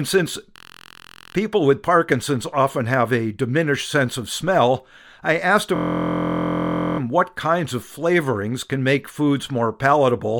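From 0.56 to 1.35 s, before "people with", and 5.76 to 6.99 s, between "of smell I asked" and "what kinds of flavorings", a system hang loop cycles one 23.2 ms slice, fitting a 1024-sample buffer, into a steady 43.1 Hz buzz. Unlike a dropout, there's no silence.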